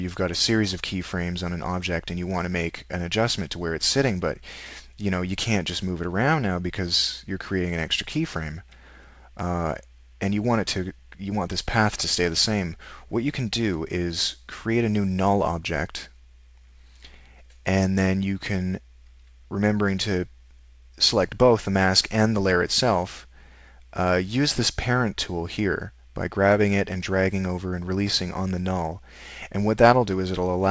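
No technical faults can be heard in this audio.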